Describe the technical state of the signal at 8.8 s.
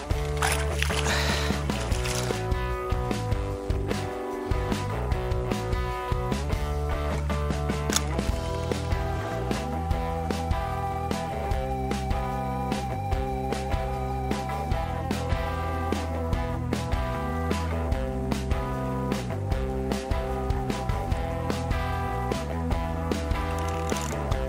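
At 8.8 s the signal carries sample clock jitter, present across the whole clip rather than only at this moment. The converter's clock wanders by roughly 10 µs, so each sample lands slightly off time and the error scales with how steeply the waveform is changing. The result is a hiss or grit sitting roughly 25 dB below the signal. Unlike a steady noise floor, it swells with loud, bright passages and disappears in silence.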